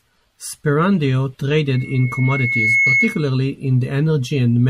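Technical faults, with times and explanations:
1.74–3.31 s, loudspeaker feedback squeal: a steady 2.2 kHz tone swells over roughly a second until it sits somewhat above the speech, because the microphone is hearing its own loudspeaker and the loop gain at that frequency exceeds one, so the tone keeps reinforcing itself.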